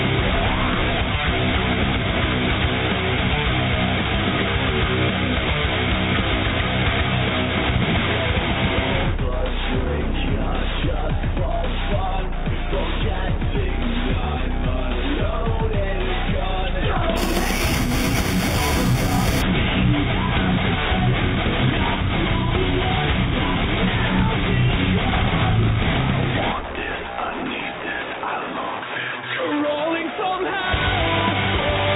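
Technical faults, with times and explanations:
17.17–19.42 s: imaging from sample-and-hold upsampling. Audio at 8 kHz was raised to 48 kHz by repeating each sample without a smoothing filter. Mirrored spectra result, the first spanning 4 to 8 kHz at about 13 dB below the signal, heard as a bright metallic fizz.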